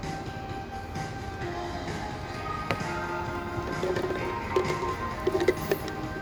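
No technical faults can be heard anywhere in this recording of sounds.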